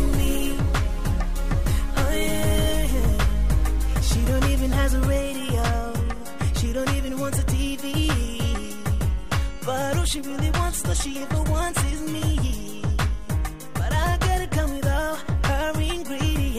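Listening closely, nothing in the audio stood out as a technical fault.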